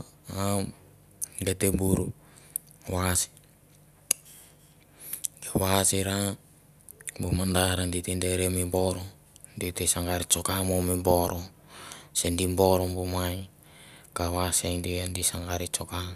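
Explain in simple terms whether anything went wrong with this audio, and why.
Nothing went wrong here, since the signal stays steady throughout and no technical fault can be heard at any point.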